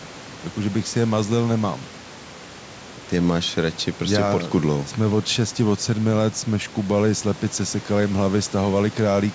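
No faults found in the speech; the call microphone processing leaves nothing above 8 kHz and trims the lowest bass as expected, and the room noise sits about 22 dB below the speech.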